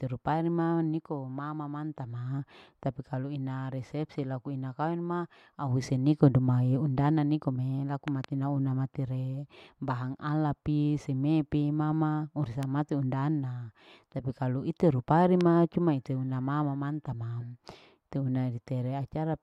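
Loud pops hit at 8.08–8.26 s (two in quick succession), at 12.63–12.65 s after "pi seme pi mama", and at 15.41–15.43 s after "tapi kalu ite rupari", roughly 10 to 15 dB above the speech. The likely cause is a voltage spike, which adds a sharp thump while the speech continues underneath rather than breaking off as in a dropout.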